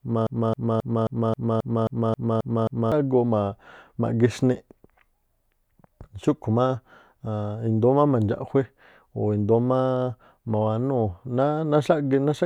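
Broken-record loop from 0 to 2.92 s: a 0.27 s fragment repeats exactly about ten times, already under way at the start, likely a stalled player resending its last buffer.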